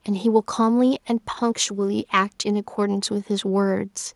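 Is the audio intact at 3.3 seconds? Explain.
Yes, the audio is intact at 3.3 seconds, with no audible fault at that point.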